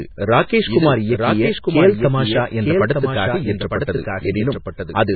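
From the start of the clip to the end, the speech is accompanied by a doubled audio track. A second, full-band copy of the same speech runs about one second behind the original and roughly 5 dB quieter. It carries no decay or added room colour, so it sounds like a distinct repeat layered under the first pass rather than an echo. This is likely the result of the signal being captured twice, once through a slower path, or of an edit leaving two copies out of alignment.

Also throughout, the audio shows heavy MP3 compression damage. Nothing remains above 4.5 kHz, which removes the upper part of sibilants and consonant detail and leaves the speech dull. With so few bits available, weak frequency components are dropped and restored from frame to frame, producing a watery, swirling texture with chirpy artefacts on s sounds and smeared onsets. The degree of damage points to a very low bitrate, likely around 16 kbps.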